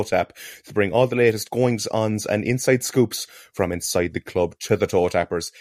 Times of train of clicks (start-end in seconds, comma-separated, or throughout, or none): none